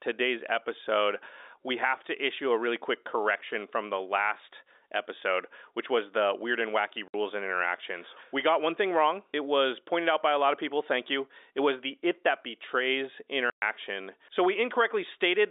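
Telephone-band speech, carried as G.711 with its content confined to roughly 300 Hz to 3.7 kHz, drops out twice through packet loss filled with silence: at 7.08 to 7.14 s (60 ms) and 13.5 to 13.62 s (120 ms). Both gaps are multiples of 30 ms, which fits 30 ms packets, and the receiver inserts pure silence. On the waveform they are flat-line holes with abrupt edges, and on the spectrogram blank vertical bands.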